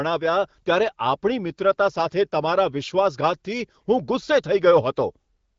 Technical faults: none

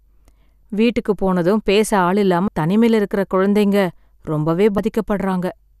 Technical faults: compressed frames skipped

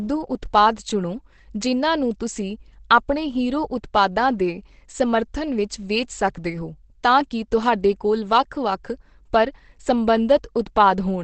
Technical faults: Opus compression

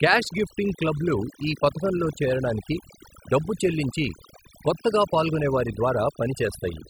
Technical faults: overdone noise removal

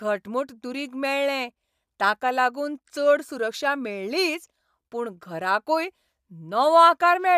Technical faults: none

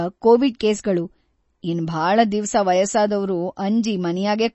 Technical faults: MP3 compression

